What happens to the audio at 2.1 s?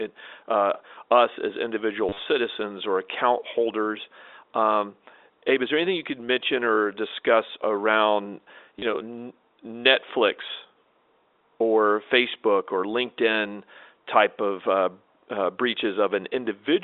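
Packets were dropped between 2.09 and 2.19 s, just after "uh us as individual", and the receiver filled each gap by replaying the last packet it had, which is packet loss with the last packet repeated. About 80 ms went missing across that 100 ms, in runs up to 40 ms, which fits roughly 10 ms packets. The loops buzz briefly near 100 Hz, a short robotic stutter.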